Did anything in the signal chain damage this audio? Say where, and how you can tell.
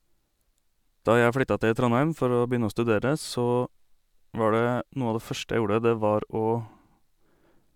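No, none of the stages leaves a mark on this speech recording. Every stage, from wiring and conversion through to storage and playback, passes the signal along without audible damage.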